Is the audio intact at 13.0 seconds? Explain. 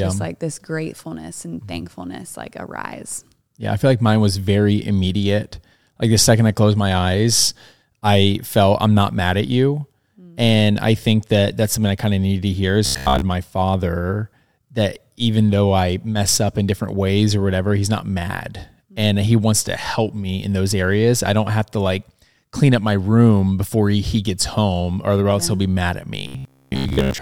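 No. Between 12.86 and 13.22 s, after "of needed to hear" and before "my father that even", robotic sound from repeated short buffers takes over. Most of the span is likely a 15 ms slice replayed, forcing a rigid metallic buzz near 66.7 Hz.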